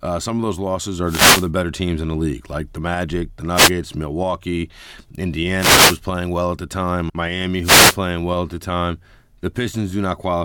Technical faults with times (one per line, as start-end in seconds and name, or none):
1.04-1.49 wireless microphone noise hit
3.54-3.71 wireless microphone noise hit
5.56-6.00 wireless microphone noise hit
7.62-7.97 wireless microphone noise hit